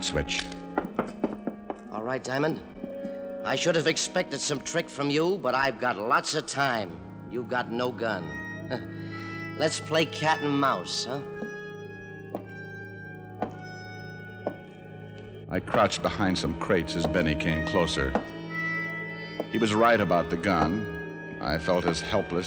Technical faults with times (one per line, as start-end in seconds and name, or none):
0.00-22.46 resampler restarted on every block